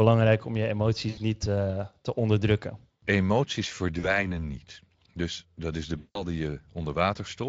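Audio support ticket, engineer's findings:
VoIP packet loss concealed by the speech codec, 1.09–1.19 s after "om je", 3.99–4.30 s, and 5.97–6.24 s after "dat is de". The decoder extrapolates the last pitch and filter into a fading buzz or coloured noise, not a silent dropout, and the sound stays weak after each gap. About 80, 40 and 180 ms of audio are lost.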